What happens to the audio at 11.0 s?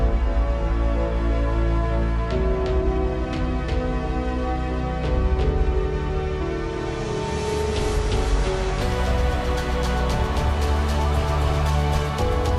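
At 11.0 s the doubled audio track is present, as it is throughout the clip: a second full-band copy trails the original by around 300 ms at roughly equal level, with no decay or room colour. It is likely a second capture through a slower path.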